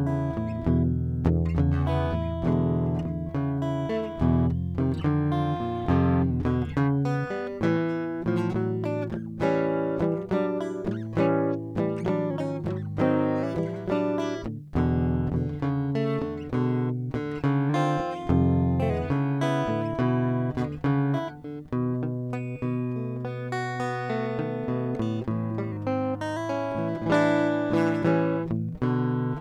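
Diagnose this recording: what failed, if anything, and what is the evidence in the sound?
The music lurches sharp by about a semitone from 4.55 to 6.31 s and again from 17.69 to 18.90 s, running 6.26% fast. It sags flat by about a semitone from 12.30 to 13.43 s and 25.72 to 26.37 s, running 6.26% slow. Each time it snaps straight back. Speed and pitch move together, which is likely a drift correction step at the buffer stage, where clock-matching software jumped the playback rate to refill or drain its buffer.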